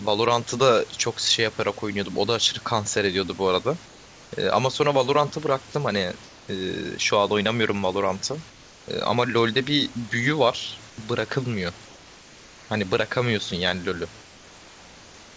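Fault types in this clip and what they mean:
Comfort noise in place of the background: in six pauses, the room's detailed background becomes a steady, featureless hiss about 2 to 3 dB quieter, likely synthetic noise filling gaps during discontinuous transmission. Unlike a noise gate, the pause never falls silent.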